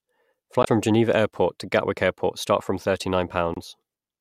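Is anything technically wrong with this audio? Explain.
Yes. The speech has damaged data in a compressed stream twice, from 0.61 to 0.68 s and from 3.54 to 3.58 s. Corrupted bytes make the decoder misread frames and lose sync while it hunts for the next header. Each spot is a short chirp or blip.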